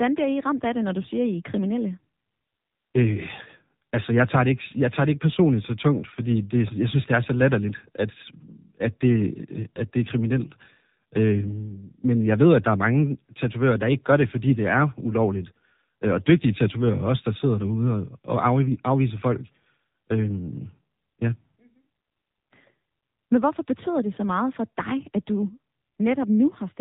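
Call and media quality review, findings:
Buzzy, synthetic speech with a hard ceiling near 3.8 kHz, present throughout the clip. The likely component is the AMR narrowband mobile codec (AMR-NB) on the voice path. Audio is sampled at 8 kHz and rebuilt from a vocal-tract model driven by sparse pulses in 20 ms frames. Codec damage is plainly audible, which fits the low 7.4 kbps mode.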